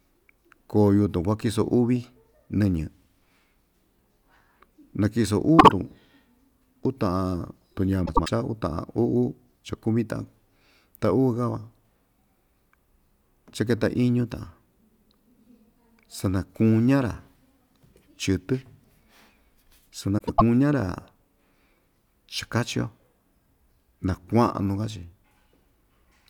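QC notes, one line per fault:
5.59–5.72 s, 8.06–8.29 s, 20.18–20.42 s: frames out of order. Adjacent blocks of about 48 ms, then 96 ms, play swapped, giving garbled flutter.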